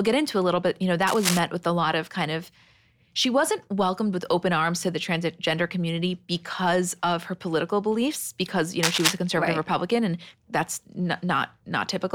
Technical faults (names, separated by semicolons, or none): cable scratch noise